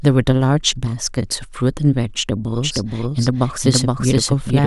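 A slower path likely adds a doubled audio track: from 2.57 s to the end, an equally loud copy trails half a second behind.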